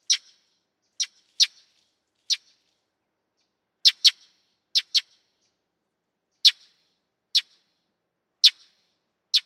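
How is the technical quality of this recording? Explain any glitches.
The recording has one clear fault: a doubled audio track running throughout. A second full-band copy of the sound trails the original by about a second, a few decibels quieter, with no decay or room colour. It likely comes from a slower capture path or misaligned edit.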